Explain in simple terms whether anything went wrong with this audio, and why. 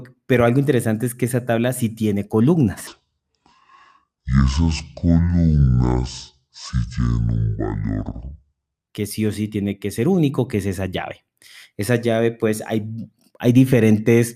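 From 2.87 to 8.88 s the speech plays as a section at the wrong speed: it runs at about 0.55 times normal, so everything drags and the pitch drops by roughly ten semitones. The likely cause is an editor or player using the wrong clock for that stretch.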